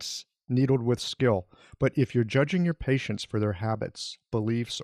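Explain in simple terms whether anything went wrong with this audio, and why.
The speech sounds dull and gurgly all the way through. That points to MP2 compression, the likely cause. This squeezes the sound into narrow frequency bands and drops the top ones when space runs short. What remains sounds coarse and grainy.

From 3.73 to 4.16 s there is a burst of DAB burbling. This is a patch of short noise blips laid over the speech. Errors from weak digital radio reception corrupted the stored sound data, so short blips of noise appeared in single bands.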